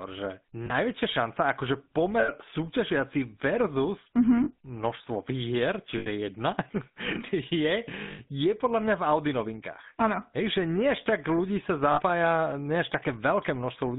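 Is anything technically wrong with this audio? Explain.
Yes. Throughout, the speech carries GSM full-rate codec damage. The decoder rebuilds the voice from a vocal-tract model driven by sparse, evenly spaced pulses, confined to about 150 Hz to 3.7 kHz. The result is a buzzy, gravelly roughness, not just the dullness of plain band-limiting.

Lost GSM frames occur at 0.66–0.72, 2.2–2.31, 4.44–4.51, 5.98–6.07, 8.12–8.19 and 11.92–12.02 s, each lasting 40 to 80 ms. The decoder repeats the last good frame. Each gap therefore becomes a brief, rough metallic ring rather than a silent dropout or a click.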